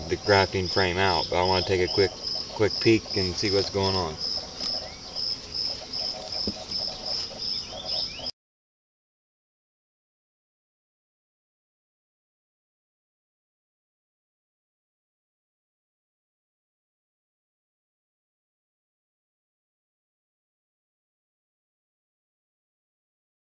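No technical faults are audible anywhere in the clip.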